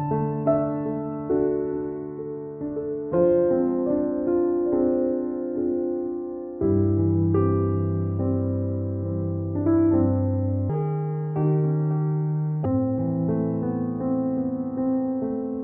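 The audio has a section at the wrong speed from 10.70 to 12.65 s. It runs 1.56 times fast, about seven semitones higher, likely from a clock mismatch.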